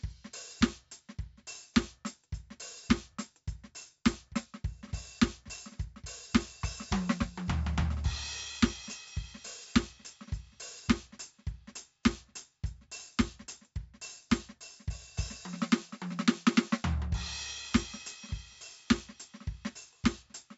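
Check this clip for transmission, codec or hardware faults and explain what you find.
Two faults are audible in this music.

4-bit ADPCM compression, throughout: each sample is a coarse 4-bit step from a prediction, so heavy gritty hiss rides every loud passage, and nothing above 7.7 kHz, which fits roughly 64 kbps.

CD scratch ticks, 3.82 to 4.46 s: five regular ticks, the longest about 2 ms, where unreadable data on a damaged disc was interpolated or muted once per revolution.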